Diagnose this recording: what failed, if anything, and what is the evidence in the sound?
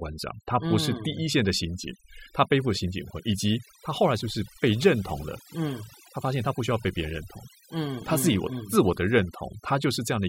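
The pauses fall to near silence dotted with twinkling specks from start to finish. This is overdone noise removal in the call processing stage: a suppressor set too hard switches off individual frequency bands near its noise estimate, taking the quieter parts of the voice with them.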